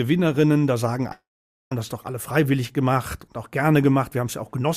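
At 1.12 s the sound smears into a brief fading buzz, then goes quiet for about 0.49 s before resuming at 1.72 s with 590 ms gone. This is likely a long network dropout: the receiver briefly extended the last audio, then gave up.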